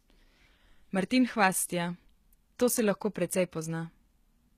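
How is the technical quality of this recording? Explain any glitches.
The recording carries plainly audible codec damage across the whole speech clip. Throughout, the s sounds come out gritty and metallic, and the treble sounds synthetic. That points to very low-bitrate coding, likely HE-AAC compression, around 20 kbps, rebuilding the upper band from copied lower bands. A spectrogram would show smeared, repetitive treble with mismatched harmonics and nothing above 14.9 kHz.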